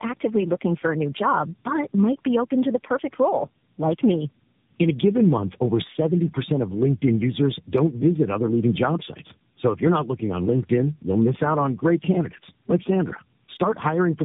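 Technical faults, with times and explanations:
Throughout, tandem speech coding: rough, muffled, warbly speech with nothing above 3.8 kHz, which points to about three lossy speech codecs in a row, each re-coding the last one's output.
1.06 to 13.57 s, clock slip clicks: faint regular ticks about every 1.5 s, starting after "actively looking for a". Each is likely a single sample slipped between free-running device clocks.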